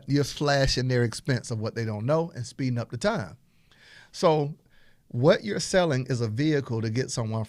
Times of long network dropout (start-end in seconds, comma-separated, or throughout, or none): none